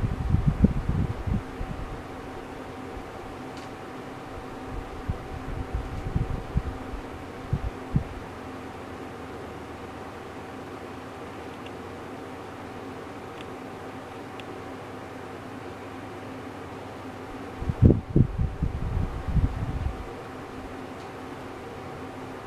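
No technical faults can be heard anywhere in the audio.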